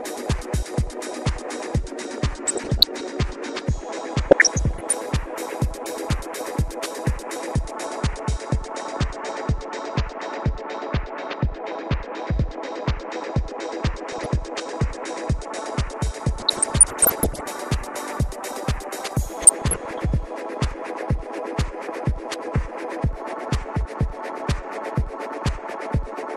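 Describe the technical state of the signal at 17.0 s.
At 17.0 s the signal is inside a burst of DAB burbling running from 16.40 to 17.41 s. Bit errors, at a rate under about 1 percent, slip past error correction and corrupt sub-band samples and scale factors, so single bands jump in level frame by frame. It sounds like bubbling mud with chirps and squelches. On a spectrogram it shows as flickering horizontal blocks. The waveform shows jagged level spikes.

Underneath, the audio is dull, with a gurgling, granular texture, most likely from MP2 compression at a rate that fits about 80 kbps. Starved upper sub-bands switch off and the remaining ones are coarsely quantised. On a spectrogram the top end is cut off and patchy, with bands blinking on and off.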